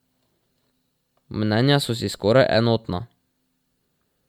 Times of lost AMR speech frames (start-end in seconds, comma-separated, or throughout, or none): none